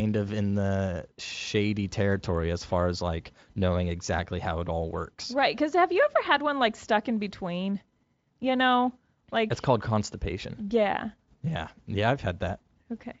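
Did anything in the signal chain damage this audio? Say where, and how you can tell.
No, the speech passes through a Speex stage at what sounds like a high-quality setting, consistent with roughly 34 kbps, and shows no damage anywhere in the chain beyond, at most, a faint trace of that codec.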